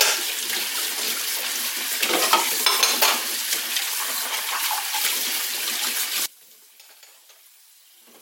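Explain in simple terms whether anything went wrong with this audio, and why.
Something does go wrong near the end. From about 6.26 s until the clip finishes at 8.22 s, the sound suddenly becomes much quieter, as if most of its body has drained away. The likely cause is one channel inverted: one side of the stereo pair is flipped upside down, so when the two sides are combined, everything they share cancels out. A simple volume drop would keep the same fullness, only softer.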